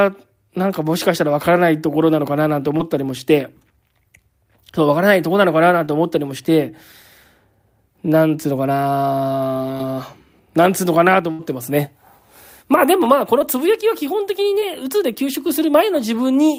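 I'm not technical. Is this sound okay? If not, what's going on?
No. At 2.77, 5.85, 9.78, 13.39 and 14.60 seconds the speech has a brief smear or wobble. That is short concealed packet loss: about 20 ms of the call arrived too late, and the receiver covered the gap by stretching the sound just before it.

From 11.31 to 11.41 seconds there is a longer held buzz or fading hiss, and a little speech is skipped. That is a burst of packet loss: about 80 ms went missing in a row, and the patch-up could only carry the last sound forward before the audio picked up again.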